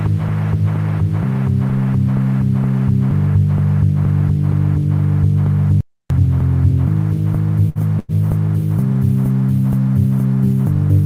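At 5.81 s the sound just stops dead for about 0.3 s, picking up again at 6.10 s. That's a playback stall, most likely the player starving for data or its thread getting blocked, so the output simply goes silent.

Then come two bursts of packet loss, at 7.69–7.78 s and 7.99–8.11 s. Each time the receiver stretches the last bit of sound and fades it, for about 59 ms and then 92 ms. When it resumes, roughly 60 ms of audio is skipped each time. The second gap also carries a 32 ms delay shift.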